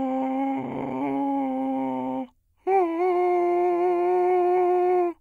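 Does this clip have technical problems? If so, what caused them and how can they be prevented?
Yes. Sample clock jitter runs throughout the music. An unsteady converter clock, wobbling by a microsecond or two, times samples early or late, adding a fine hiss roughly 50 dB down. Unlike a fixed noise floor, it swells with loud, bright passages and disappears in quiet. A low-jitter clock or well-locked converter prevents it.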